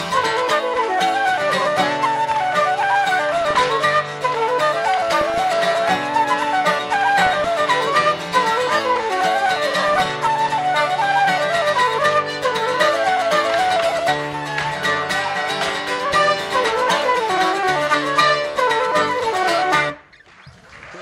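DAB burbling at 3.33 to 3.63 s, 5.17 to 5.55 s, 7.19 to 7.49 s and 9.88 to 10.54 s: bit errors of under one percent slip past error correction into the MP2 audio data, producing short blips of noise in single sub-bands.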